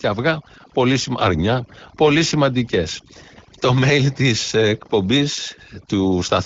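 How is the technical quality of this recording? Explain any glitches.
The technical quality is compromised by one fault that runs through the whole clip: overdone noise removal. A noise suppressor was set far too aggressively, pulling individual frequency bands down or muting them whenever they came close to its noise estimate. Quieter parts of the speech fell below that threshold and were removed along with the noise. As a result, the background collapses into near silence dotted with twinkling specks. The band-limited, slightly coded character, with nothing above 7.5 kHz, fits an AMR wideband (HD Voice) link at around 12.65 kbit/s.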